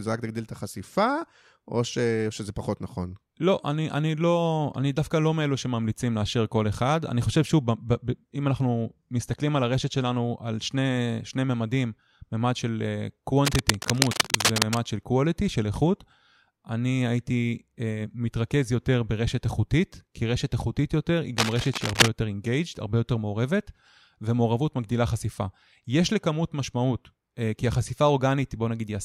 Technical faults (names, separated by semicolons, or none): cable scratch noise